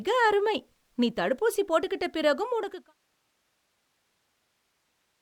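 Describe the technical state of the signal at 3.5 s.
The audio is intact at 3.5 s, with no technical fault present.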